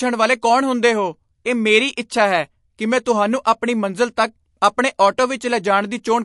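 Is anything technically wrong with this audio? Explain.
Yes. The speech has two related faults.

MP3 compression runs through the whole clip and is plainly audible. Nothing is present above 11.3 kHz, so the top of the treble is missing. The sound has the watery, swirling texture and metallic chirping on s sounds that comes from weak frequency lines flickering on and off between frames. This is likely MP3 coding at a low bitrate, and the damage fits something around 48 kbps.

Pre-echo appears at 4.98 s and again at 5.17 s. Each time a brief hiss runs ahead of a sharp onset and spreads about 10 ms before it. The codec works in blocks and spreads its quantisation noise across each one, so noise meant for a loud attack also fills the quiet moment just before it. The onsets therefore sound soft and smeared rather than crisp.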